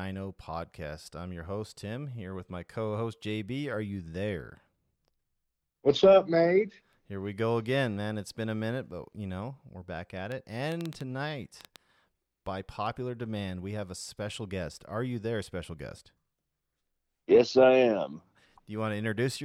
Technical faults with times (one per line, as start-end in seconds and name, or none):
10.32-11.77 train of clicks